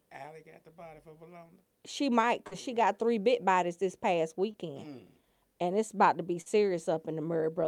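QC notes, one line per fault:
2.47–2.53 s, 4.51–4.55 s and 6.41–6.48 s: short concealed packet loss. About 40, 20 and 40 ms of audio never arrived in time, just before "she got three bit", after "bit bodies this past" and after "it's about to be". The receiver stretched the preceding sound across each gap and then blended back, so each one comes through as a brief smear or wobble rather than the hard silent dropout of an unconcealed loss.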